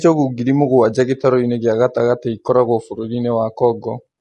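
From start to finish the speech sounds rough and grainy, likely from low-delay AAC compression at a rate near 32 kbps. Its short frames resolve harmonics poorly, so a spectrogram shows smeared harmonic lines, noise filling the gaps between them, and a weakened top band.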